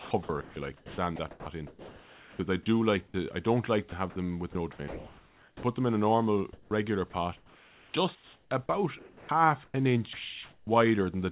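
From 0.0 to 2.39 s, just before "I do like", the speech is chopped by the voice detector, likely because it kept toggling transmission. About 1.4 s of sound is swapped for comfort noise. Between "I do like" and "I don't like", at 3.08 to 3.14 s, a single 60 ms gap is likely sound dropped by the voice detector. Unlike the chopping, this is one clean handover to steady noise before the speech resumes. The choppy switching likely returns from 3.89 to 5.63 s, replacing about 0.9 s. It likely comes back once more from 6.53 to 10.67 s, after "them in a normal", replacing about 2.1 s in repeated bursts. Throughout, the narrow telephone band with nothing above 4 kHz fits a G.711 call codec.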